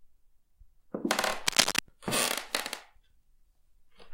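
Cable scratch noise runs from 1.46 to 1.79 s in this recording of sounds: a dense, uneven rustling and crackling sits about 5 dB above the underlying sound, most likely from a worn cable or connector being moved so its contact resistance fluctuated rapidly.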